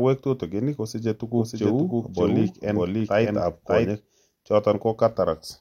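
A doubled audio track runs from 1.36 s to 3.90 s in this speech clip, starting right after "tutigin kosiche". A second full-band copy of the speech trails the original by about half a second and sits at roughly the same level, so the two overlap as a dry, uncoloured echo with no decay. It cuts in and out abruptly, likely because a slower capture path or an edit layered two out-of-step copies.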